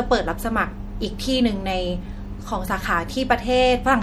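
Across the whole clip, from start to finish, the speech has a watery, swirling texture, with the s sounds breaking into metallic chirps while consonant attacks smear. This is most likely MP3 compression, and the damage is plainly audible. Short of bits, the encoder has zeroed weaker frequency lines, which flicker on and off between frames. The degree of loss fits a bitrate around 64 kbps.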